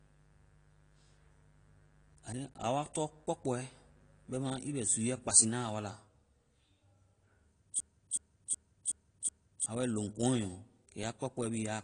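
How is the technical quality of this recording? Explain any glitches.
The recording has three clear problems: coarse codec damage throughout, a buzz over the first half, and a stuck-buffer loop near the end.

Across the whole clip the speech sounds dull and smeared, with nothing above 10.1 kHz and a plainly audible warbling, fizzy texture on sibilants and held sounds. This is likely AAC compression at a low rate, in a range that fits about 32 kbps. At that rate the encoder drops the high band and quantises the remaining spectrum coarsely, leaving gaps and noisy fill.

From 0.0 to 5.31 s, up to just before "na a wa la", a steady raspy mains buzz sits roughly 30 dB below the speech. It is built on 50 Hz, and sharp switching spikes twice per cycle spread its harmonics up into the kilohertz range. A dimmer, rectifier or unshielded cable in the signal path can let this interference in.

From 7.80 to 9.66 s a system hang loop takes over. 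One 0.37 s slice of audio repeats exactly five times, at 2.69 Hz, giving a skipping-record effect. The host or driver stalled while the audio hardware kept replaying the same ring buffer, which fits a 16,384-sample buffer. About two seconds of the real signal are lost.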